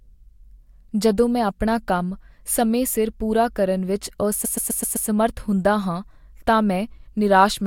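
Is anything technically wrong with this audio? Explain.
Yes. From 4.44 to 5.08 s the speech stutters: a fragment of about 0.12 s is heard again and again, five extra times, so the sound seems to catch on one spot before moving on. This is repeated frames. A short run of compressed audio was delivered or written more than once, which fits a block of several codec frames, and the decoder simply played each copy. The duplicates add 0.64 s to the clip's running time.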